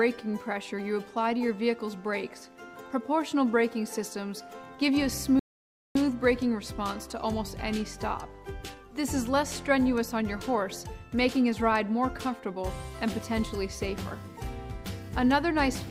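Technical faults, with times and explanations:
5.39 to 5.95 s, rebuffering stall: the audio halts into silence for about 0.56 s and then picks up at exactly the point where it broke off. The player had used up everything it had downloaded and had to wait for more data before continuing. What separates this from a dropout or packet loss is that no sound goes missing. The material on either side joins seamlessly, and the only change is 0.56 s of extra time inserted into the playback.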